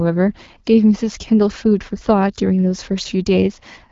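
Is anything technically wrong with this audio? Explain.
No, nothing stood out as a technical problem on listening.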